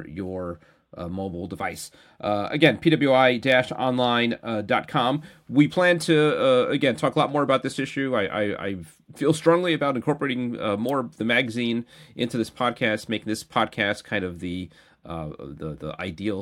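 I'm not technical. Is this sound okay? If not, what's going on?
Yes, it's fine: there's nothing wrong to hear anywhere in this recording, so you can relax about it.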